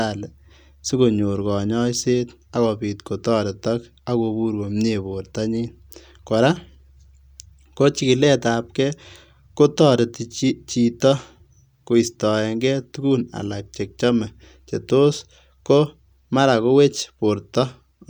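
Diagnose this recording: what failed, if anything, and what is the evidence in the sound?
Nothing failed; no stage shows any fault here.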